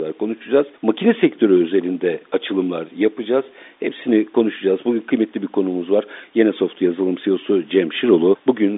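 No technical faults can be heard anywhere in the speech. It comes through a working G.711 telephone path, so the sound is held to the narrow line band of about 250 Hz to 3.7 kHz with nothing above 3.8 kHz, and any coding grain is faint at most.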